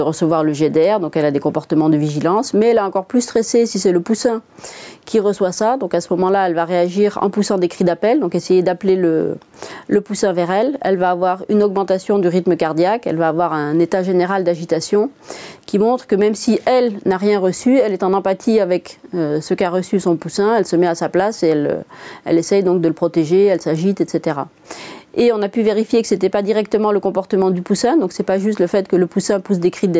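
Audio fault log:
throughout gain pumping: The input gain was likely set too high, so a fast limiter clamps down on each loud sound and lets go in the gaps. The gain swings by around 10 dB, leaving everything squashed.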